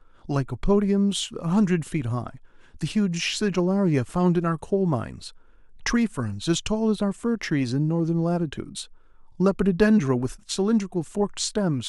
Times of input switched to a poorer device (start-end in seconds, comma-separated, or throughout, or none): none